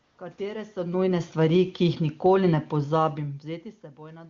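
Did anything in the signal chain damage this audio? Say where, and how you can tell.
Yes. From 0.03 to 0.17 s the real room background gives way to a smooth, steady hiss lasting about 140 ms. That is AMR comfort noise, inserted at the codec stage: the phone flagged silence, stopped sending speech frames, and the receiver synthesised noise from a rough level and spectrum estimate.

Between 0.79 and 3.11 s the speech and its background sink together by about 6 dB in a slow slide. This is automatic gain falling in call processing: the AGC judged the input too loud or its background noise too strong and eased its gain down gradually.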